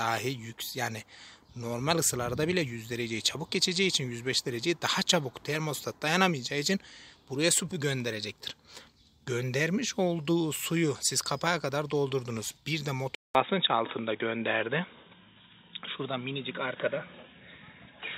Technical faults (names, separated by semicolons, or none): input switched to a poorer device